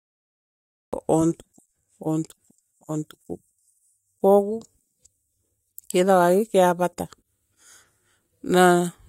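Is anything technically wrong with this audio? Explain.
Yes. The speech has a cut-off start. From 0 to 0.93 s there is only digital silence, and then the sound begins abruptly mid-utterance at 0.93 s. Capture began late, so the opening was never recorded. There is no natural attack.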